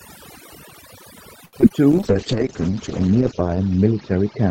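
Throughout the clip the voice sits over a background that drops and breaks up, flecked with twinkling specks. That is overdone noise removal: a suppressor set too hard drove individual frequency bands down whenever they resembled its noise estimate, and quieter parts of the speech went with them.

From 1.45 to 1.55 s a sound hangs on too long, held with a slight buzz or dip before speech resumes where it left off. This short stall from a late packet came from a jitter buffer running dry: the receiver stretched the last sound across about 75 ms until the packet arrived, losing nothing but adding 75 ms of delay.

Two brief smears follow, at 1.61 to 1.64 s and 1.68 to 1.82 s, where the sound wobbles. Each is short concealed packet loss: about 20 ms never arrived, and the receiver covered the gap by extending the preceding sound before blending back. The second also stretched the timing slightly.

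From 1.93 s to the end the speech turns rough and muffled, losing its upper detail, with the coarsest stretch lasting about 1.4 s. This is a call bitrate drop, with the encoder cut from 48 to 8 kbps, which narrowed the audio bandwidth from 20 kHz to 8 kHz.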